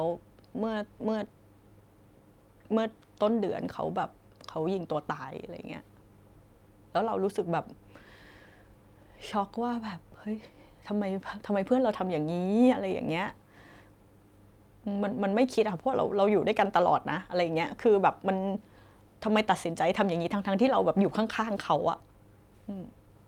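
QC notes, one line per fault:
No faults were heard in this speech clip. Nothing calls for a time or a note.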